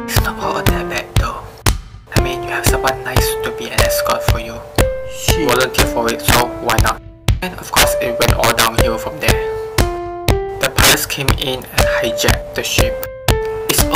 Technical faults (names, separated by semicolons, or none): integer overflow